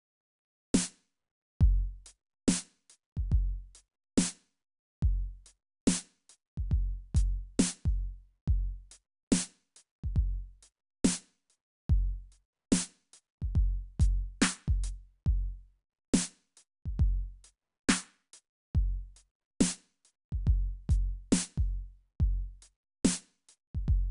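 Throughout the music, 4-bit ADPCM compression codes each sample as a coarse step from a prediction, leaving gritty hiss that swells with loud passages. A spectrogram shows level-tracking broadband noise and nothing above 10.6 kHz, consistent with roughly 89 kbps.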